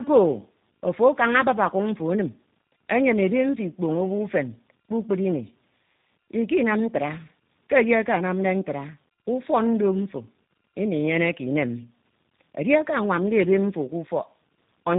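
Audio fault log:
Throughout, tandem speech coding: the speech sounds like three speech codecs in series, likely CVSD twice and then G.729A, with each stage re-encoding the last one's damaged output. That stacking makes the speech rough, muffled and warbly, with nothing above 3.8 kHz.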